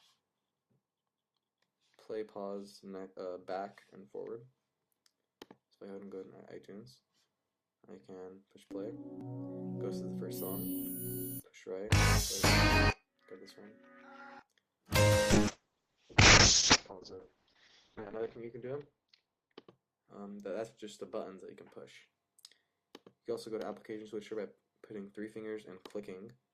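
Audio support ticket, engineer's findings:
Call bitrate drop, 15.36 to 20.77 s. Sound turns rough and watery, with top end gone. Probable component: encoder reacting to a falling bandwidth estimate. Coarse quantisation, which fits a drop from around 48 kbps to about 6 kbps, bottoming out for roughly 2.8 s. Spectrogram: content above 8 kHz (normally up to 20 kHz) cut off flat, with smeared, blocky texture below. Waveform: little visible change. Full bandwidth returns at 20.77 s.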